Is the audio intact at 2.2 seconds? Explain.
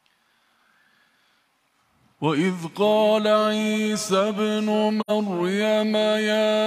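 Yes, the audio is intact at 2.2 seconds, with no dropout, click, distortion or other fault audible at that moment.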